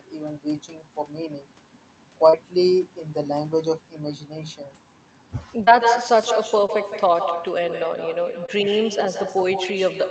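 From the first syllable to the end, the speech carries echo with no canceller: the far end's loudspeaker feeds its microphone, and the returning copy arrives roughly 150 ms late and about 7 dB down, so every phrase has a quieter, thinner shadow. On a spectrogram, each syllable's energy pattern is repeated a short step to the right and fainter. In the waveform, onsets are doubled.

Short concealed packet loss interrupts the speech four times: at 2.29 to 2.35 s, 5.65 to 5.69 s, 6.67 to 6.70 s and 8.46 to 8.50 s. Each time, a few tens of milliseconds failed to reach the decoder in time. The receiver extended the preceding sound and then blended back into the real audio, so each spot is heard as a brief smear or wobble. On a spectrogram, the harmonics run unnaturally flat or turn smudgy and noise-like across the gap. The waveform shows a stretch of continued sound, then a blend back into the real audio.

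The call path underneath sounds band-limited at 8 kHz, consistent with Opus at around 32 kbps.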